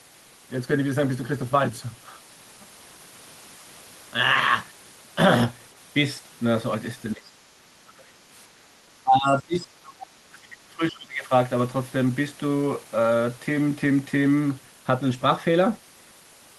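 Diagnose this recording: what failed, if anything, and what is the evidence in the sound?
Call processing: the echo canceller likely mistook the talker for echo, so speech suppressed in double talk drops about 20 dB at 7.14–8.06 s and 25 dB at 9.03–11.31 s.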